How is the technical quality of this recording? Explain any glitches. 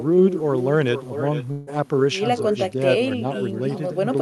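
Two faults stand out in this speech recording: a constant echo and a brief break in the audio.

The echo with no canceller runs through the whole clip. Every phrase returns about half a second later, about 10 dB quieter and thinner. The far end is playing the call over a loudspeaker, its microphone picks it up, and nothing subtracts it before it is sent back. The gap is what separates it from room reverberation: the copy arrives as a distinct delayed repeat, not a smear that trails off the original.

From 1.51 to 1.69 s the sound breaks up. For most of that stretch it turns into a buzzy continuation of the preceding sound that fades out, and the speech then resumes further along with a piece missing. The likely cause is a long network dropout. No packets arrived, so the receiver's concealment synthesised filler rather than leaving a hole. That is why this sounds like a smeared buzz and not a hard cut or click, and it also differs from a brief packet loss, where the patch would pass almost unnoticed.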